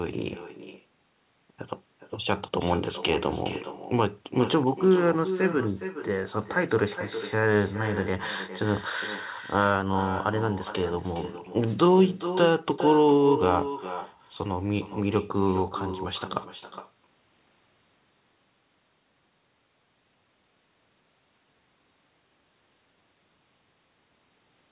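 Speech with an echo with no canceller running through all of it: every phrase returns about 11 dB quieter and thinner, roughly 0.4 s later, as the far end's loudspeaker feeds its microphone. On a waveform each burst trails a smaller copy; a spectrogram shows faint repeated smears. Nothing appears above 4 kHz, which fits a G.711 narrowband call path.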